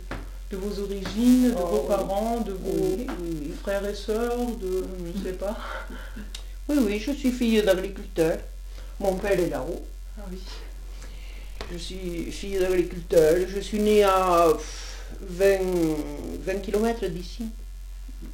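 A steady 345 Hz buzz runs throughout, tracking the sound's level: a filter restarted on every block, which fits 128-sample blocks, each starting with a small transient.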